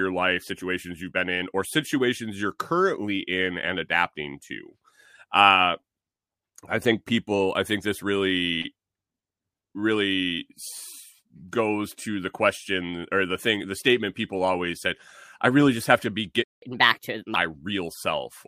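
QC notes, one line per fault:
16.44–16.62 s, playback stall: The player most likely ran short of buffered data or had its output thread held up, so for about 0.18 s nothing reached the output. Right after "just have to be" the speech breaks off into dead silence mid-flow, a noticeable gap. It then carries on, and the lost time has to be made up afterwards.
16.62–17.36 s, catch-up at higher speed: To recover the time lost in the stall, the player drains its backlog by resampling it at 1.25 times normal speed. Because resampling changes speed and pitch together, the speech following "just have to be" comes out hurried and raised by roughly four semitones, with a thinner, chipmunk-like quality. Once the backlog is cleared, around 17.36 s, playback drops back to normal speed and pitch.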